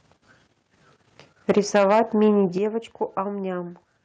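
From 1.49 to 2.27 s the speech shows microphone overload: the loudest syllables turn harsh and crackly, peaks pushed about 5 dB past full scale with a few percent of samples flattened. That likely comes from input gain set too high, and unlike codec distortion it follows the peaks only. At 1.58 s, inside that stretch, the microphone volume is stepped down by about 3 dB, and at 2.58 s by about 8 dB. Voice and background drop together in one abrupt step, likely the call software lowering the device's input gain, which sets it apart from a fade or a speaker moving away.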